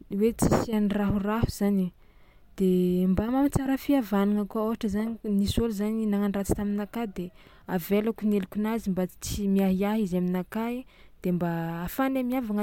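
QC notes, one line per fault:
No faults found; the speech runs unbroken with nothing to log.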